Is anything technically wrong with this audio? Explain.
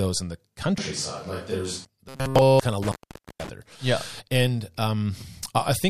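Yes, three faults are audible in this speech clip.

From 0.78 to 1.85 s, just after "in the", the voice turns hollow and roomy. Level falls about 5 dB and room noise rises. This is likely a switch to a distant microphone.

From 2.09 to 2.60 s, just before "kind of", the voice becomes a rigid metallic buzz at 133 Hz. This is robotic sound from repeated short buffers, likely a 7.5 ms block looped throughout.

From 2.83 to 3.49 s, just after "kind of", an intermittent contact cuts the sound for about 480 ms. The break has crackle at both edges and faint hiss in the gap.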